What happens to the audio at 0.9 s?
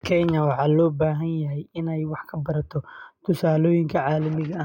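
Nothing goes wrong at 0.9 s; the speech there is intact, with no dropout, click or distortion.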